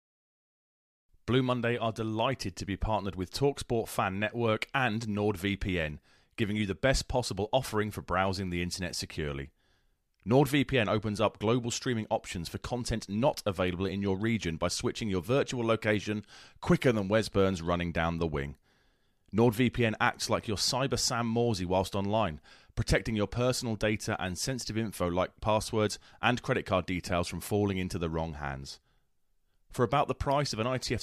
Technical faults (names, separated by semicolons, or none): none